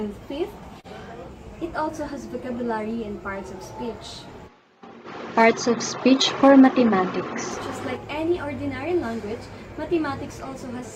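No technical faults can be heard anywhere in this clip. The sound runs on continuously, with no point where anything audibly goes wrong.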